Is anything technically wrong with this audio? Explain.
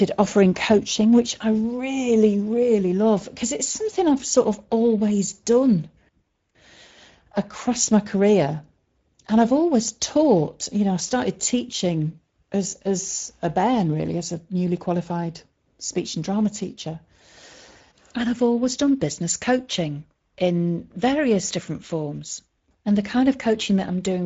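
Yes. The speech carries Speex codec damage from start to finish.

Throughout, the speech sounds noisy and hoarse, which points to a Speex stream at roughly 17 kbps. The coder has too few bits for the excitation signal. A spectrogram shows a hard ceiling at about 7.7 kHz with empty space above it, and the harmonics below look smeared and grainy.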